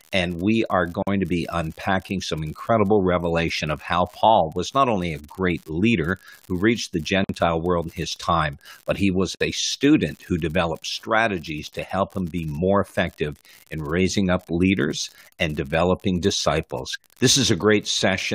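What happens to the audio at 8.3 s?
At 8.3 s the speech carries the crackle of an unreliable data bit, present across the whole clip: one marginal bit flips in random samples, each error an equal-sized spike, giving a steady fizz.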